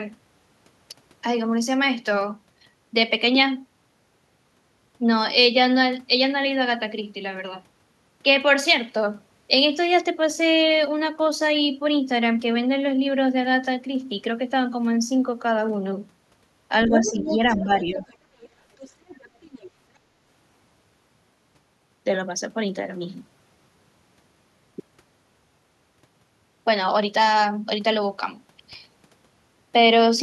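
At 16.86 to 17.39 s, and again at 17.57 to 17.99 s, the talker's speech dips by roughly 10 dB in short stretches, a few hundred milliseconds each time. This is speech suppressed in double talk: both ends spoke together, and the echo canceller likely could not tell its own talker from the loudspeaker echo, so it pulled everything down. On the waveform the envelope sags abruptly. The spectrogram shows the upper harmonics thinning or breaking into gaps.

Overlapping the first dip, from 16.93 to 17.59 s, the other side's voice leaks through at about 10 dB below the talker. Further scraps follow at 17.99 to 18.16 s (about 15 dB down), 18.40 to 18.49 s, and 18.78 to 19.71 s (both faint, about 25 dB down). This is the other side's voice leaking through, likely loudspeaker echo the canceller failed to remove. The spectrogram shows a second, weaker harmonic pattern that does not line up with the talker's, and the waveform shows low-level bursts.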